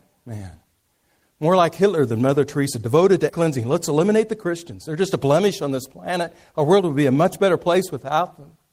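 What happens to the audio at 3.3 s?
At 3.29 to 3.31 s there is a skip ahead. About 0.4 s of speech was dropped and the two sides were joined directly, with no gap filled. On a spectrogram the harmonics and formants break off and resume at new positions, and the waveform splices together abruptly.

From 3.39 to 5.41 s a jitter buffer speed-up follows. The receiver trimmed short pitch-period pieces again and again, removing roughly 150 ms, so speech runs at 108% and sounds hurried at unchanged pitch. Harmonic spacing stays constant while syllables look compressed in time.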